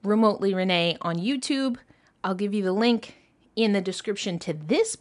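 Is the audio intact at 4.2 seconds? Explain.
Yes, at 4.2 seconds the audio is intact, with no dropout, click, distortion or other fault at that moment.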